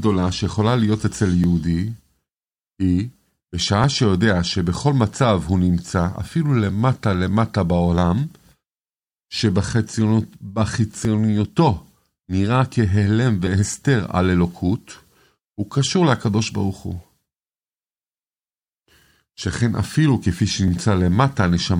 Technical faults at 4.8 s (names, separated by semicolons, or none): clock drift buffer slips